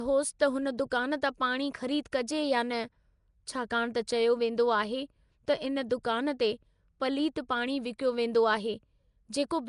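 Throughout the speech the sound is rough and hissy, with a smeared, underwater quality and nothing above 10.6 kHz, likely Nellymoser compression. Weak bands receive no bits and are filled with noise, and the plainly audible damage points to a rate around 44 kbps.

At 5.90 s a pre-echo appears. A sharp attack falls late in a transform block, so quantisation noise sized for the loud onset spreads across the block and fills the quiet moment before it. A hiss about 11 ms long precedes the attack, which sounds softened.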